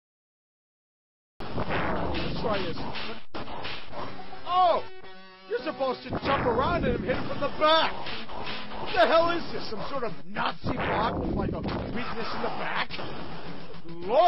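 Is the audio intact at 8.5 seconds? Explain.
Yes, at 8.5 seconds the audio plays through intact, with no dropout, click, glitch or other fault at that moment.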